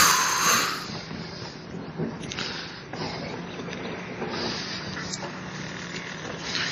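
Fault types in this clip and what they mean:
Adaptive stream at a lower bitrate, from 0.84 s to the end: the stream switches abruptly, with no gap, to a leaner encoding. Everything above 10 kHz vanishes and coding artefacts thicken, which fits a step down from 128 to 32 kbit/s MP3.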